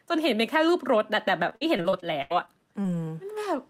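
Speech that turns choppy from 1.49 to 2.86 s, with short holes (the longest about 79 ms). This is repeated packet loss: audio kept dropping out, and each gap was patched by extending the preceding sound, covering roughly a fifth of that stretch.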